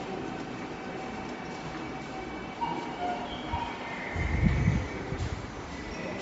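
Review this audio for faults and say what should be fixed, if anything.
Throughout, the sound stops at 7.7 kHz and has a plainly audible grainy, breathy edge. This is likely Bluetooth LC3 compression, which zeroes upper spectrum and noise-fills it in 10 ms frames at a bitrate that fits around 32 kbps. To prevent it, capture over a wired connection or raise the LC3 bitrate.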